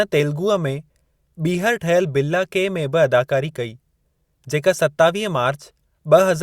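No technical faults can be heard in the speech recording. Nothing in the audio stands out for comment at any point.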